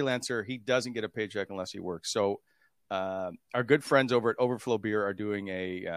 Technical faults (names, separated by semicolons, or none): none